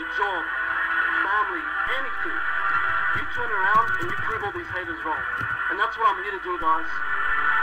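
A low thump at 1.87 s and another at 4.31 s bracket a DC step of about -30 dBFS, where the waveform's zero line jumps and then returns. A second thump at 6.62 s marks a step of about -28 dBFS that holds to the end.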